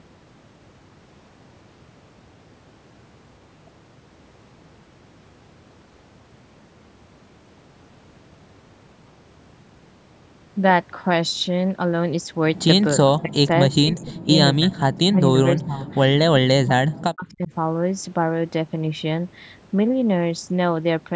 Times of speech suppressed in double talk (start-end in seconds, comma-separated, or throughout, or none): 12.96-14.28, 14.57-15.87, 16.30-17.52